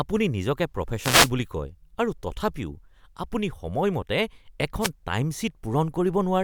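At 0.99 to 1.31 s and again at 4.80 to 4.90 s there's a wireless microphone noise hit: the FM radio link fades as reflections cancel, receiver hiss swells up over the speech, and you get a quick swish of static, the second one shorter.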